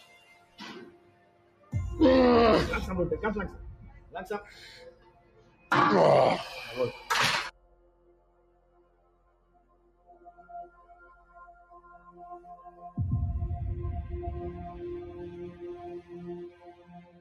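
Throughout the clip, a noise suppressor applied to music or sounds treats sustained, steady material as noise. Its gain swings by around 20 dB, so held parts and decays keep sinking while onsets punch through. The result pumps and flutters, and tails feel clipped short. On a waveform the envelope breathes unevenly, with sharp attacks followed by premature collapse. A spectrogram shows steady bands thinning and fading between bright transient columns.

The sound is cut by the noise suppressor in eight stretches: 0.0 to 0.59 s (deepest drop about 11 dB), 0.91 to 1.72 s (about 12 dB), 3.95 to 4.14 s (about 9 dB), 4.9 to 5.71 s (about 12 dB), 7.51 to 10.44 s (about 12 dB, the longest, roughly three seconds), 10.69 to 11.36 s (about 9 dB), 11.53 to 11.72 s (about 7 dB), and 16.51 to 17.2 s (about 10 dB). In each, sustained content dips audibly below its surroundings. These show as hollowed-out waveform sections and darker, emptied spectrogram regions.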